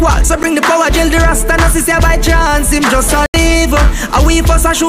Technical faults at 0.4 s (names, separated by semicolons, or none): block of digital silence